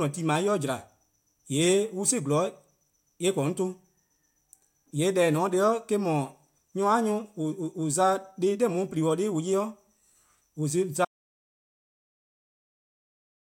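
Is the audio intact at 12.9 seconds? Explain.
No. At 12.9 seconds the speech sits inside an audio dropout to silence. It runs from 11.05 s to the end of the clip. The speech cuts off abruptly into silence, with no room tone. The input was likely lost while recording continued, writing silence.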